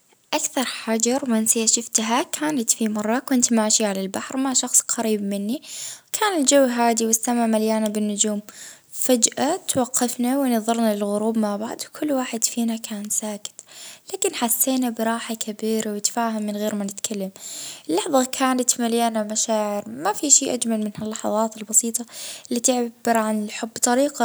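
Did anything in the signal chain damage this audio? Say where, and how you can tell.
No, nothing along the chain from capture to playback has left a mark on this recording that I can hear.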